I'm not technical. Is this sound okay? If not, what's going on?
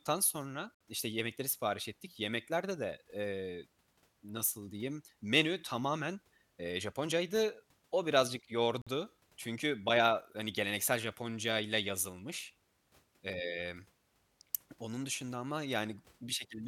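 No. There are two brief holes, each a gap between stream segments: 0.75 to 0.81 s (about 60 ms), just before "işte yemekleri sipariş ettik", and 8.82 to 8.87 s (about 50 ms), just before "çünkü bayağı hani geleneksel". Where two pieces of the stream were joined, their timings didn't line up, so the player filled the gap with silence. The sound cuts out abruptly and resumes, but nothing is lost.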